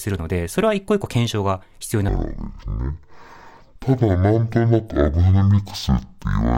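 From 2.09 s to the end, a stereo read as mono fault sets in: interleaved left and right samples are taken as one channel. The speech drags at half speed and drops a full octave, 12 semitones, with a faint mirrored copy high in the spectrum.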